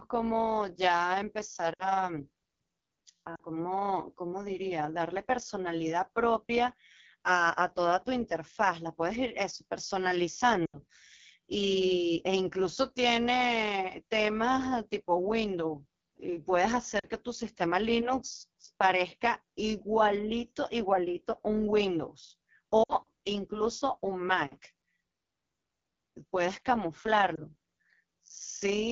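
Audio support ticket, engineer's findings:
Overlap-add ripple, whole clip. Metallic buzz on the speech with extra tones around the voice, level pumping by about 6 dB at a rate somewhere around 150 Hz. Points to the frame reassembly stage: windowed frames rejoined with an overlap whose windows don't sum to constant gain, so level swings once per frame. Check the window/hop pairing in the processing chain.

AMR wideband (HD Voice) codec, whole clip. Plainly audible codec damage: raspy, rough speech texture, upper band hissy rather than detailed. Sound fits one of the lowest AMR-WB modes, around 8.85 kbit/s. At this rate the pulse-excited vocal tract model can't track the voice well, and the 6.4 to 7 kHz band is shaped noise only. Recommend negotiating a higher mode, 12.65 kbit/s or above.

Lost AMR speech frames at 1.73 to 1.85 s, 3.35 to 3.42 s, 10.66 to 10.77 s, 16.99 to 17.06 s, 22.84 to 22.94 s, 27.36 s. 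Gaps of 20 to 80 ms, longest at 10.66 s. Symptom: brief smeared, warbling stretch fading out, speech returning weak or rough. Radio-side frames failing checksum, decoder repeating last pitch and vocal tract parameters with decaying gain.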